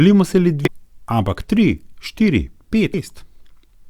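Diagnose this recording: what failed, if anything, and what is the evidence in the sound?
The codec stage failed, with damaged data in a compressed stream. The speech breaks twice with short digital glitches. The first runs from 0.65 to 0.68 s, between "si le" and "ampak tri". The second is a brief blip at 2.93 s. Each lasts only a couple of tens of milliseconds. Bytes in the stream were lost or overwritten there. The decoder misread those frames, lost sync, and resumed at the next valid frame header.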